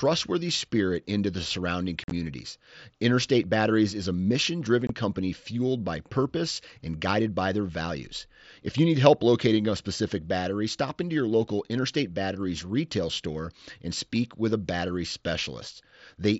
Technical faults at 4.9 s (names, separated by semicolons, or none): unconcealed Bluetooth headset packet loss